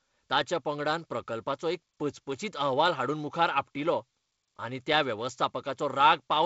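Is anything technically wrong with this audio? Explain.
No, nothing here sounds technically wrong.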